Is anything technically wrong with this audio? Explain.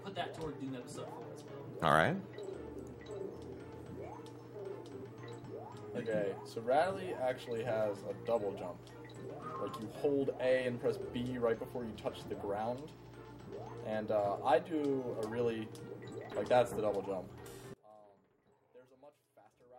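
Yes. From 17.74 s to the end at 19.78 s, the sound collapses by about 27 dB into a faint remnant. The likely cause is one channel inverted: with one stereo side in reversed polarity, whatever both channels share cancels when they are summed to mono, leaving only their difference. Unlike a dropout or a simple level drop, the sound doesn't go silent or get uniformly quieter. Everything the channels share nearly vanishes, background included, leaving only a faint residue.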